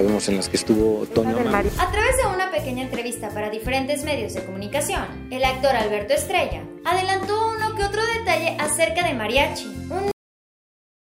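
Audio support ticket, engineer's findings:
Cut-off end at 10.11 s: sound stops mid-event, no decay, flat digital silence to clip end. Final buffers never written or played. Waveform: abrupt truncation to zero line.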